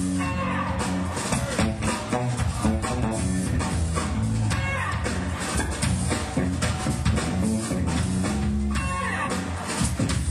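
No technical faults are audible.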